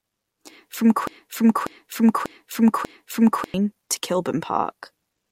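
The stream likely stalled at 1.07 s and resent its last fragment, a broken-record loop: one 0.59 s slice repeats four times until 3.54 s.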